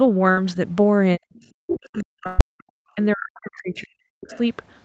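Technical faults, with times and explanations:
0.31–0.39 s and 2.27–2.41 s, burst of packet loss: the sound smears into a held, fading tone, then jumps ahead. Lost packets were concealed by extending the last audio, about 60 ms and 120 ms missing.
1.17–1.34 s, 1.61–2.61 s and 2.95–4.32 s, speech suppressed in double talk: the speech dips by up to around 40 dB, likely because the echo canceller turned both voices down while both sides talked.
1.35–1.46 s, 1.70–2.03 s and 4.29–4.39 s, other side's voice leaking through: scraps of a second voice appear, far below the speech at first and more audible in the middle stretch, likely echo the canceller missed.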